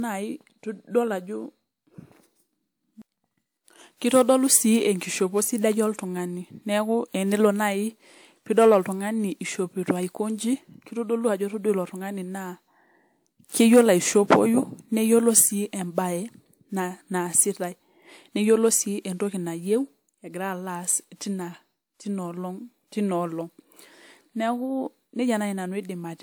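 From start to finish the speech has a swirly, hollow quality, with consonant attacks smeared and a wash of noise that seems heavier than a 128 kbit/s WMA stream should leave on its own. Content reaches up to about 20.1 kHz. This points to generation loss, likely from the audio being decoded and re-encoded roughly three times, each pass requantising on a shifted frame grid so the errors compound.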